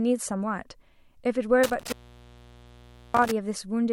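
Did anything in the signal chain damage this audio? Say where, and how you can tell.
Yes. The analogue wiring has an intermittent contact. From 1.64 to 3.31 s the speech cuts out, crackling each time the connection breaks and remakes. The open time adds up to 1.22 s. A loose plug or cable is parting, leaving faint hiss.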